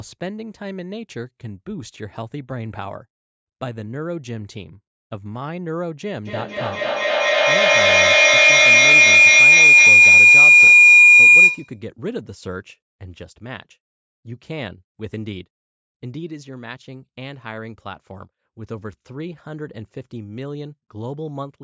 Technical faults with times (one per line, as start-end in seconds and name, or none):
6.26-11.86 feedback howl